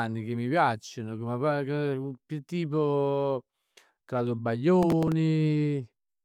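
From 4.83 to 5.12 s there's a burst of processor overload crackle: the machine couldn't finish its tiny buffers, around 5 ms each, in time, so around seven of them got filled with stale audio, giving a gritty, tearing rasp over the speech.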